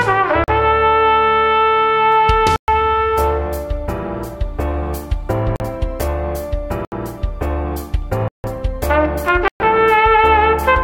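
Six times, blocks of samples were replaced by zeros, as happens when the output buffer is not filled in time. Each block of digital silence cuts the sound off abruptly and restores it with no fade. The blocks fall at 0.44–0.48 s and 5.56–5.60 s (40 ms each), 2.56–2.68 s and 9.48–9.60 s (120 ms), 6.85–6.92 s (about 70 ms) and 8.28–8.44 s (160 ms). All of them are long enough to be heard as short holes in the sound.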